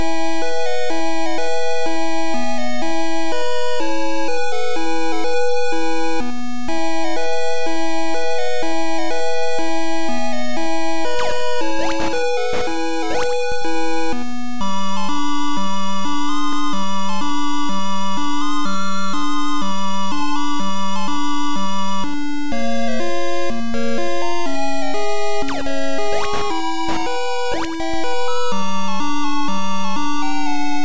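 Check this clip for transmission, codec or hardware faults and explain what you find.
Nothing stood out on listening that would point to a problem in how this audio was carried, encoded or captured.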